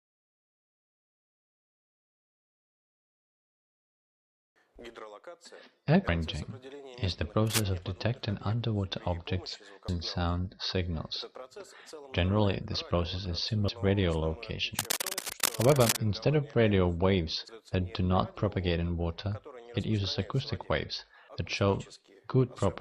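At 6.08 s the sound jumps forward abruptly. About a fifth of a second goes missing, and the two sides butt together with no gap. This is audio missing between chunks. The likely cause is a recorder handling the signal in 4-second blocks and dropping a short piece at each changeover. The same skip returns at 9.88 s, 13.68 s and 17.48 s. They fall 3.8 s apart, because each lost piece shortens the block.

Between 7.47 s and 7.66 s, a burst of rough, uneven scratching sits over the sound. It is loud, only a little below the main signal. This is cable scratch noise, likely from a worn cable or connector being moved. Its contact resistance jumps around and injects noise. A longer spell runs from 14.79 s to 15.99 s. It sounds like harsh rustling, and it crosses none of the skips.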